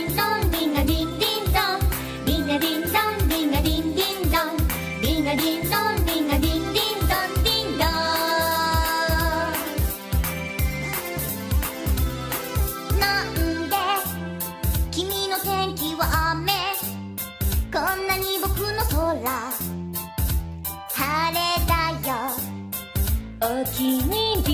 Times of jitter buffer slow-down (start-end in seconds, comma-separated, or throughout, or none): none